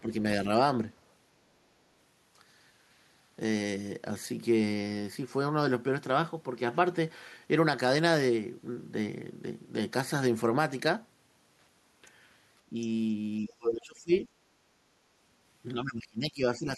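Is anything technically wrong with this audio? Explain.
Yes. The speech has two related echo-cancellation faults.

Speech suppressed in double talk, at 0.01–0.11 s, 12.70–12.75 s, 13.48–14.12 s and 15.74 s to the end. The likely cause is both ends of the call talking at once: the echo canceller could not separate the near talker from the loudspeaker echo, so it turned everything down. The first two dips are brief and shallow, roughly 10 dB and 5 dB. The later two are deep, around 25 dB and 20 dB, leaving the voice sunk.

The other side's voice leaking through, at 12.81–12.86 s. It is likely residual loudspeaker echo that the canceller failed to remove from the microphone signal. It comes through as a faint scrap of a second voice, roughly 25 dB below the main speech. It is short, and it sits just after the brief suppression dip at 12.70 s.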